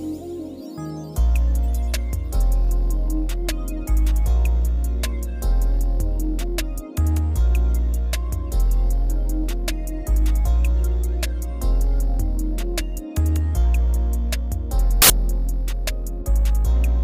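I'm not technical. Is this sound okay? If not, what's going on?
No. From 15.02 to 15.10 seconds there is a burst of harsh hiss. The samples were built from the wrong bytes, so the sound turns into loud noise.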